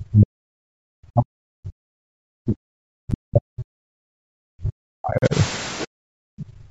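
From 0.0 to 2.58 s, and again from 2.97 to 5.34 s, the speech is suppressed in double talk. The level sinks, at worst by around 40 dB, and parts of the sound drop away. The likely cause is an echo canceller that could not separate the talker from loudspeaker echo while both sides spoke. It pulled everything down.

At 3.11 s, a block of digital silence cuts in for about 9 ms. Samples were replaced by zeros, likely because the output buffer went unfilled. The hard edges give a sharp tick rather than an audible gap.

From 5.18 to 5.22 s, the sound stops dead for 40 ms and then resumes. This is a Bluetooth stall. The likely cause is interference delaying packets until the headphone buffer ran empty. Playback waited for the resent data.

From 5.79 to 5.86 s, the other side's voice leaks through. It is a faint scrap, about 25 dB under the speech. The likely cause is loudspeaker sound that the echo canceller failed to fully remove from the microphone.

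From 5.87 s to the end, the background is gated by the echo canceller. The room sound drops by up to about 40 dB. The canceller clamped the microphone while the loudspeaker played. The background falls away rather than fading naturally.

From 6.39 to 6.46 s, the other side's voice leaks through again. It is weaker this time, roughly 30 dB below the speech. Like the first scrap, it is short. The same incomplete echo removal likely lets it past.

Call microphone processing is present throughout. Nothing reaches above 8 kHz, and the lowest bass is filtered out.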